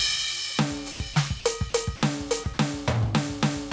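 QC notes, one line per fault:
throughout: gain pumping. The level swings by something like 15 dB, and the music's dynamics are squashed flat. The likely cause is gain set far too high for the microphone, with a fast limiter pulling it down on every peak.
0.92–1.00 s, 1.14–1.16 s, 1.40–1.44 s, 1.70–1.74 s, 1.96–2.02 s, 2.44–2.46 s, 2.54–2.58 s: sound dropped by the voice detector. The music briefly gives way to flat, steady noise for 20 to 80 ms, then snaps back. The likely cause is that the sender's detector mistook these passages for background and stopped sending, and the receiver filled the gaps with comfort noise.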